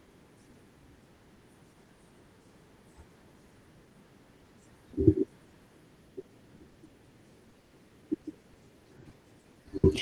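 Between 6.21 and 6.91 s there is repeated packet loss (robotic sound). Four short holes, the longest 60 ms, are each concealed by stretching the preceding audio, which leaves the speech choppy. The same fault returns from 7.49 to 9.85 s, heavier this time, with fourteen gaps of up to 120 ms and about a fifth of that stretch filled in by concealment.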